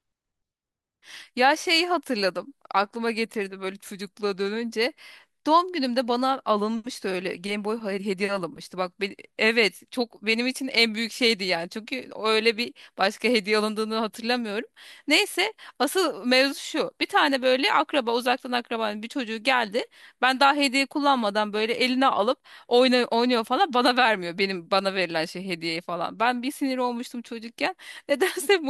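No technical faults are audible.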